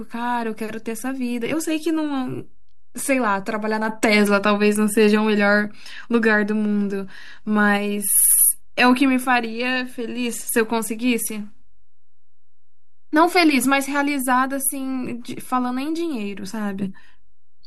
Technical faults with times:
0.00-17.66 DC offset
8.19-8.32 repeated frames

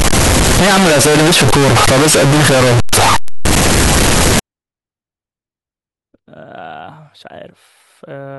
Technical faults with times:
0.00-4.39 float read as integer

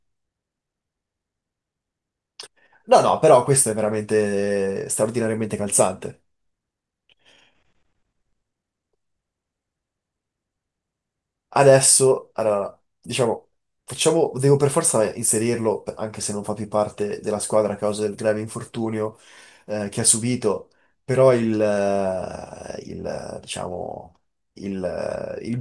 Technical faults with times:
none

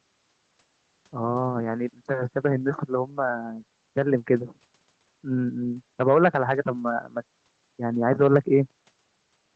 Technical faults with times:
none

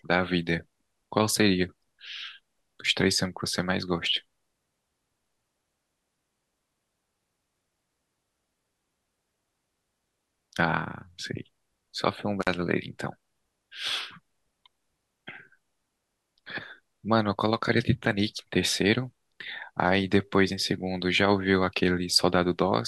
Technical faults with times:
12.41-12.47 intermittent contact

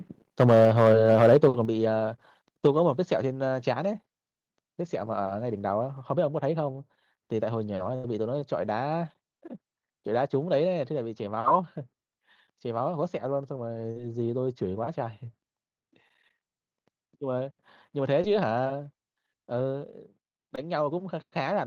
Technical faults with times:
0.40-1.48 microphone overload
0.65 microphone volume stepped down
1.65 microphone volume stepped down
7.95-8.05 burst of packet loss
13.91-13.98 short concealed packet loss
18.22-18.25 short concealed packet loss
20.55-20.59 short concealed packet loss

